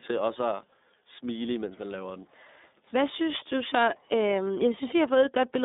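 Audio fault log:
Throughout, iLBC codec: the speech is confined to a narrow band of roughly 200 Hz to 3.7 kHz and has a plainly rough, synthetic grain. Each 30 ms frame's excitation is coded independently, which fits iLBC's 13.33 kbps mode.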